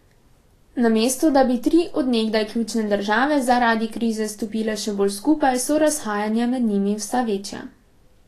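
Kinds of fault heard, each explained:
Vorbis compression: The speech has a hissy, grainy treble with roughened tones and softened consonant attacks, and nothing reaches above 14.2 kHz. The likely cause is low-quality Vorbis coding, consistent with about 33 kbps, where coarsely quantised treble turns fine detail into noise.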